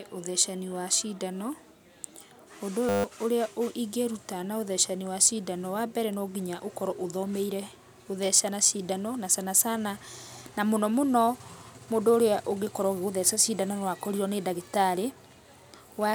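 From 2.89 to 3.04 s the speech turns into a flat 100 Hz buzz: a system hang loop, where the system froze while the hardware kept replaying one 10 ms buffer. Unlike a dropout's silence, it drones, losing roughly 150 ms of audio.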